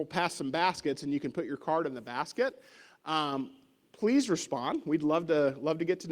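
No technical faults are audible.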